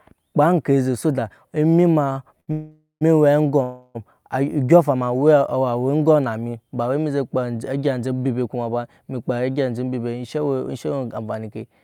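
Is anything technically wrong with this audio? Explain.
Yes, the speech has two short stalls from late packets, followed by two longer call audio freezes, all between about 2.1 and 4.0 s.

Short stall from a late packet, at 2.13 to 2.25 s and again at 2.40 to 2.50 s. A packet arrived after its playout time, so the jitter buffer ran dry and the receiver stretched the preceding sound to cover the wait: about 22 ms in the first and 72 ms in the second. Nothing is lost, but a sound lingers slightly too long with a faint buzzy quality. On a spectrogram the harmonics run flat and unchanging across the held stretch. The waveform shows the same cycle repeating, and timing after each stall is pushed later by the held amount.

Call audio freeze, at 2.52 to 3.03 s and 3.63 to 3.97 s. Here the audio stops moving forward. In the first freeze the last sound is drawn out as a decaying buzz over about 0.49 s, including roughly 0.13 s of silence. 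The second holds about 0.32 s of continued sound that never drops to silence. The likely cause is packets delayed in transit, emptying the jitter buffer until they arrive. Playback then resumes exactly where it stopped, so time is inserted rather than speech removed. On the spectrogram the frozen partials smear into horizontal bands fading toward darkness. The waveform shows a repeating, shrinking envelope, flat in the first freeze's silent portion.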